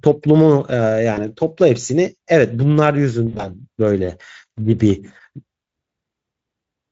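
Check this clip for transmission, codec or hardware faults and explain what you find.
The clip has two dropouts caused by VoIP packet loss concealed by the speech codec. Near 1.13 s, about 40 ms of audio was lost, which fits two 20 ms frames. From 3.27 s, about 100 ms was lost in gaps scattered over 160 ms, with a longest run of 60 ms. The decoder filled each gap by extending its last pitch and filter at falling gain, so the speech smears into a buzzy tone or coloured noise that fades. It stays weak until about 1.28 s and 3.52 s. The Speex coding around these points is light.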